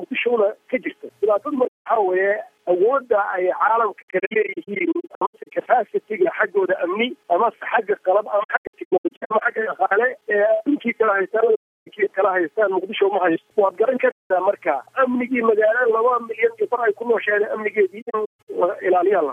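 AAC frame loss with muting leaves soft-edged silent holes at 1.67–1.87, 4.02–5.51, 8.43–9.42, 11.55–11.88, 14.10–14.30 and 18.02–18.48 s. The decoder zeroed the lost frames, so the sound fades out and back in. The 4.02, 8.43 and 18.02 s stretches break into scattered short gaps.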